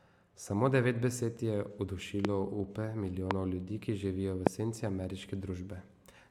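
A loud pop hits three times, at 2.25–2.27 s, 3.31–3.33 s and 4.47–4.49 s, each a single sharp crack standing well above the speech. It's likely a voltage spike from a switch, static or driver glitch, with the speech carrying on underneath.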